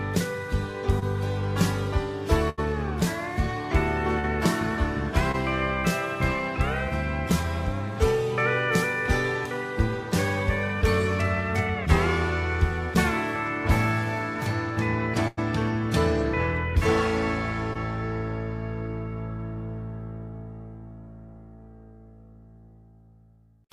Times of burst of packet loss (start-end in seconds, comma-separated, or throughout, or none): 2.49-2.59, 15.27-15.39